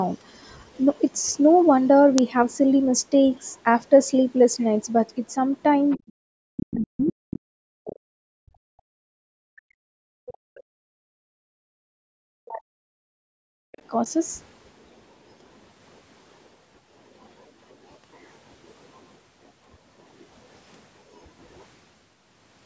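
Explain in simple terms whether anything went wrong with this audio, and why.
Yes, a few things went wrong. At 2.18 s there is an uninitialised buffer: a tiny, harsh digital crack where the system played leftover memory instead of real audio. It is far shorter than a dropout, which fits a 32-sample block played before it was filled.

At 5.9 to 6.09 s, 7.06 to 7.13 s and 13.72 to 13.81 s, a faint second voice slips in. This is the other side's voice leaking through, likely from a loudspeaker the echo canceller didn't fully clean out. It is an extra voice, not noise or distortion of the main one.

The main voice also sinks, turns dull or drops out in pieces at 5.97 to 6.07 s, 6.49 to 8.08 s, 8.4 to 12.78 s and 12.96 to 13.54 s, sometimes almost to silence. This is speech suppressed in double talk. The likely cause is the canceller turning everything down while both people talk.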